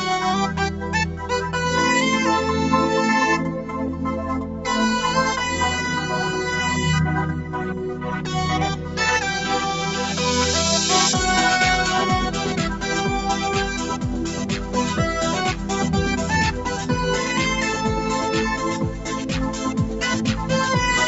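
The noise suppressor mistook parts of the sound for noise at 0.70–0.88 s, 4.42–4.65 s and 8.76–8.97 s. In each of these sound cut by the noise suppressor moments, the level sinks by about 5 dB for a brief stretch. The top end stops near 8 kHz, which fits the call path's Opus coding.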